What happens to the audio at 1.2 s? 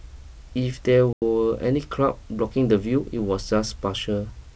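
That's packet loss on an ADPCM call. From 1.13 to 1.23 s about 90 ms of speech drops to a hard-edged silence, which points to something like ten lost packets. The decoder's predictor and step size then drift out of step, so the G.722 speech returns with brief distortion before settling.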